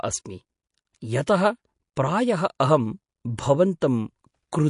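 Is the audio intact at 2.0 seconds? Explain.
No. Just before 2.0 seconds, at 1.96 s, there is pre-echo. A short hiss of about 12 ms arrives ahead of a sharp onset in the speech. This comes from a transform codec, which spreads its quantisation noise across a whole block. The attack falls late in its block, so noise meant for the loud part leaks into the quiet gap before it. The onset sounds softened and smeared.

That moment also carries MP3 compression, which runs through the whole clip. The likely cause is heavy MP3 encoding, and the sound fits a low bitrate of around 48 kbps. Nothing is present above 10.6 kHz, so the treble is cut flat. Weak frequency lines drop in and out between frames. The damage is plainly audible. The speech takes on a watery, swirling texture, and s sounds turn metallic.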